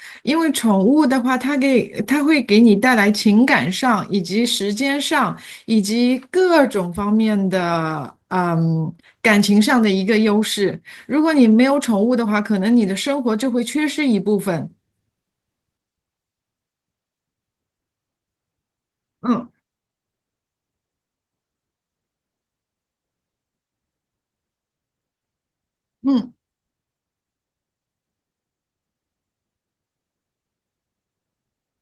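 No technical faults can be heard anywhere in the speech. The Opus voice compression runs in its hybrid mode with the full audio band kept, and its coding leaves only light traces, which fits a rate of around 20 kbps.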